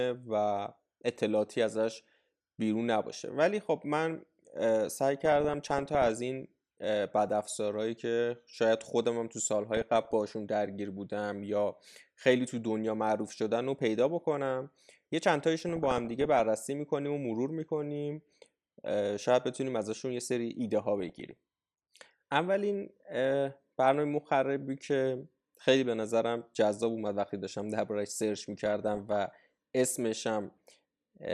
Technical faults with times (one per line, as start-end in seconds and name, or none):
5.25-6.09 DAB burbling
9.74-10.13 DAB burbling
15.62-16.40 DAB burbling
21.00-21.31 DAB burbling
28.65-29.16 DAB burbling